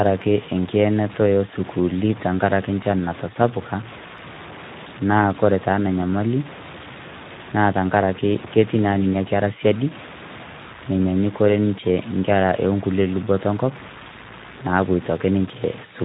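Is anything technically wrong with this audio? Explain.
Yes. The speech carries two faults, both present from start to finish.

The first is low bit depth without dither, heard as grainy, rasping distortion that rises and falls with the speech. Quiet syllables turn gritty and the softest tails sputter or cut to silence. The cause is likely truncation to very few bits, around 6, with error roughly 20 dB below the signal. Unlike hiss, this grit tracks the sound and vanishes in pauses rather than sitting steadily underneath.

The second is Speex codec damage, plainly audible throughout. This CELP speech coder rebuilds the voice from a predictive model plus a coarse excitation signal. At what sounds like a low bitrate, around 11 kbps, that excitation is starved of detail, so the voice comes out noisy and hoarse, with any upper band reduced to a noise-like fill.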